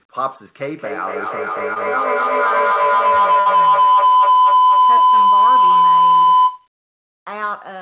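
Feedback howl runs from 0.76 to 6.77 s. The microphone and loudspeaker form a loop that gains level on each pass, so the sound narrows to a tone near 1 kHz. It swells to about 14 dB above the speech and pulses roughly every 200 ms, the loop's round-trip delay.

Short concealed packet loss follows at 1.74 to 1.78 s and again at 4.98 to 5.02 s. Each time about 20 ms of audio failed to arrive in time. The receiver extended the preceding sound to cover the gap and then blended back into real audio, leaving a brief smear or wobble.

Burst of packet loss hits at 3.40 to 3.48 s. About 60 ms went missing in a row. The receiver kept the last sound going while fading it down for about 58 ms, heard as a short held buzz or hiss. Speech then picks up further along, with that stretch gone. All of this sits in a band ending at 4 kHz, the limit of the call codec.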